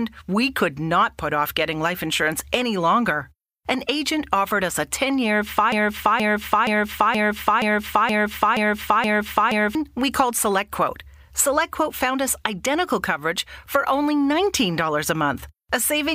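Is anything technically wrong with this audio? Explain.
Yes. From 5.72 s to 9.75 s the speech falls into a broken-record loop: a fragment of about 0.47 s plays eight times back to back, each repeat identical, before the sound resumes at "we called". The likely cause is a stalled player or stream that kept resending its last buffered piece, so the original audio for those four seconds is lost. Unlike an echo, the repeats don't fade or overlap; they're exact, full-level copies.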